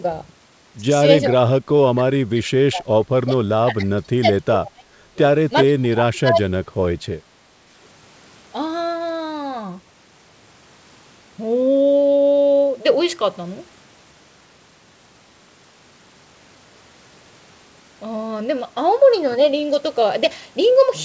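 Speech, with two stretches where the talker is pushed down while another party is apparently talking at the same time: from 1.3 to 5.19 s, with drops of around 30 dB over roughly three seconds in total, and from 5.64 to 6.54 s, dipping by about 35 dB. The likely cause is speech suppressed in double talk, where an echo canceller mistakes near-end speech for loudspeaker echo and attenuates it. The G.722 call path caps the band at 8 kHz.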